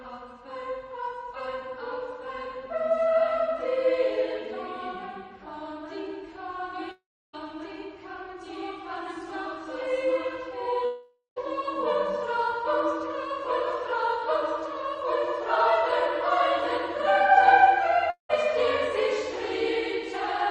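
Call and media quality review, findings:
Audio gaps at 6.91–7.35 s, 10.85–11.38 s and 18.10–18.31 s, likely a long network dropout. The last sound is stretched into a fading buzz, then silence. About 0.42 s, 0.52 s and 0.2 s of content are lost.

On the spectrogram, each gap shows smeared, decaying bands followed by a blank column. On the waveform, the envelope tapers into flat sections of roughly 0.3 s, 0.17 s and 0.12 s.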